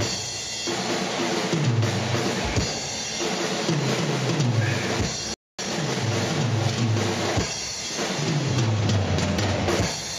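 At 5.34 s the audio stops dead and stays silent for about 250 ms, until 5.59 s. This is a playback stall. The likely cause is the player running short of data or its thread being blocked. The sound then resumes.

From 5.59 s to 6.07 s comes time-compressed catch-up. The player trims small pieces and cross-fades the joins to clear its backlog. The audio runs at 1.5 times normal speed. Pitch stays the same.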